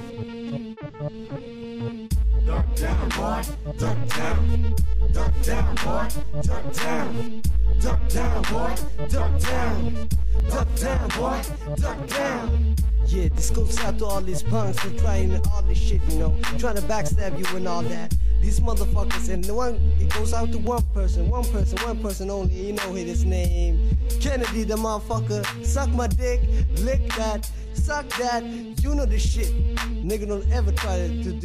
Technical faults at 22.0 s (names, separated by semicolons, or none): none